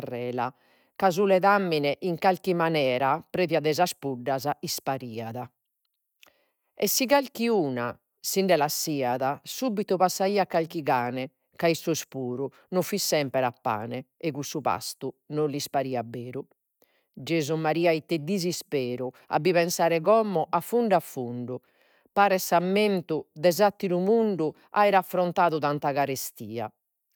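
Nothing in this recording of speech stands out as a technical fault, so there's no timeline of problems to walk through here.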